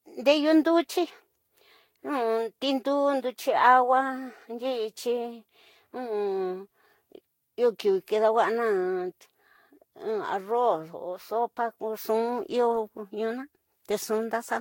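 A speech clip with generation loss throughout. The sound is swirly, smeared and hollow, and consonant attacks blur. Nothing is heard above 16.6 kHz. The damage likely comes from about five rounds of lossy Vorbis encoding near 62 kbit/s, each adding fresh quantisation noise.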